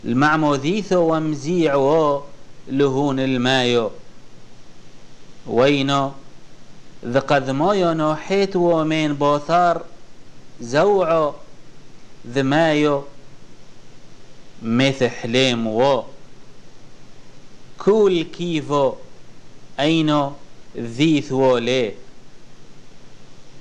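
Nothing is technically wrong with this audio, and no faults can be heard at any point in it.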